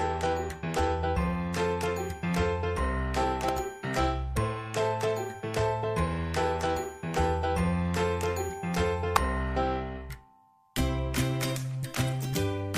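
At 3.49 s there's a sharp snap riding on top of the sound, then a second, much hotter one at 9.16 s that gets close to full scale. That's an electrical switching spike, likely a nearby switch or motor arcing and the line picking it up.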